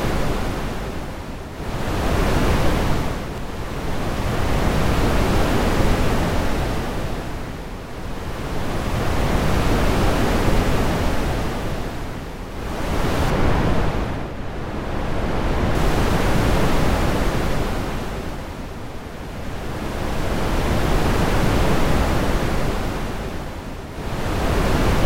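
De-emphasis applied wrongly from 13.30 to 15.75 s: an unneeded treble cut slopes the highs down, about 8 dB lower at 10 kHz, muffling the sound.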